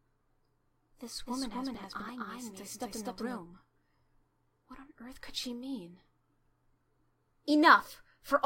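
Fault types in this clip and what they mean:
Doubled audio track: from 1.27 s to 3.39 s the same sound plays twice, with a second copy trailing roughly 300 ms behind at about the same loudness as the first. It is likely caused by the audio being captured again through a slower path, or by an edit leaving two offset copies. Unlike an echo or room reverb, the trailing copy keeps its full bandwidth, never decays or picks up room colour, and starts and stops abruptly.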